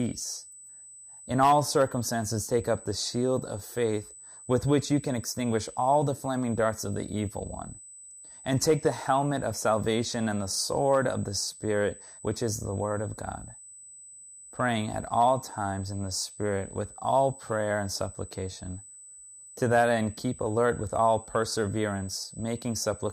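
USB whine runs through the whole clip, a steady high tone sitting at 8 kHz beneath the speech and roughly 20 dB below it. The pitch points to the bus's 125 microsecond microframes: each burst of current the interface draws on that schedule disturbs the shared power or ground, and the repetition leaks into the audio path as a fixed whine. Its pitch never drifts, so it stays audible through pauses as a thin, piercing edge on top of the voice.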